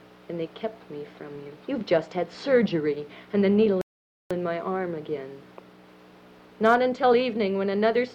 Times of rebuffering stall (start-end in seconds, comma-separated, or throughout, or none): 3.81-4.31